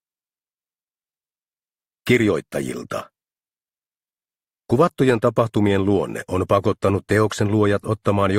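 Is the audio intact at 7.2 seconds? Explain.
Yes, at 7.2 seconds the audio plays through cleanly, with no dropout, click, distortion or other fault at that moment.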